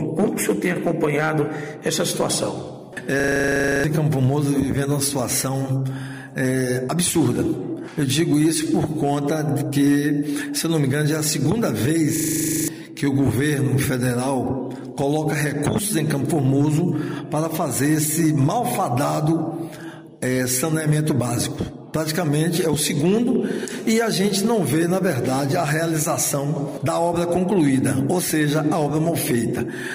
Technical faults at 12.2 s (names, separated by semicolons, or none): hard clipping; system hang loop